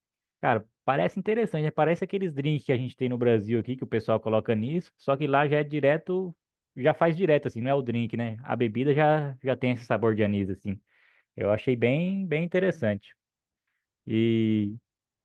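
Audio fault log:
0.51 s, 3.59–3.65 s and 4.63–4.69 s, lost packet rebuilt from error correction: the audio points to one dropped packet, then two pairs. The decoder played the low-bitrate copies carried in the following packets, so the speech continues without gaps, but these short stretches sound rougher and noisier.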